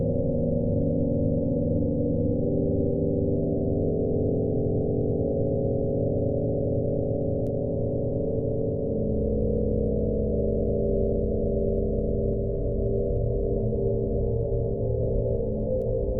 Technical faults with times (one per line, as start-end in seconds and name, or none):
7.47 bit error spike
15.82 bit error spike